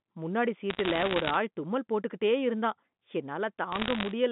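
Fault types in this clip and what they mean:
Bit errors on a digital phone line: Flipped bits corrupt single samples. A hit on a high or sign bit becomes a sharp tick. Here, at roughly one bit in a hundred, ticks crowd into crackle over unchanged speech from 0.70 to 1.36 s and 3.72 to 4.11 s.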